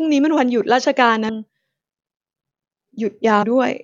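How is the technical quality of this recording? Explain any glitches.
Two brief glitches interrupt the speech, at 1.28 s and 3.42 s. Each is a short blip from damaged data in a compressed stream: corrupted bytes make the decoder misread a frame, lose sync and resume at the next valid frame header.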